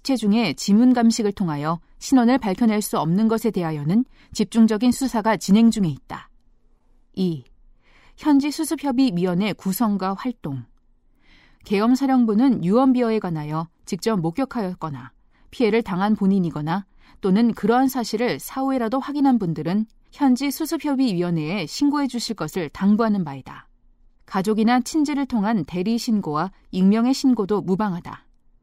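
No technical faults can be heard anywhere in this speech recording. Nothing audible goes wrong at any point in it.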